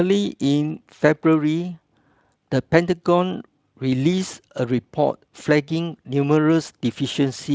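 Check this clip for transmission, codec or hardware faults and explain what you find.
No transmission, codec or hardware faults are audible here.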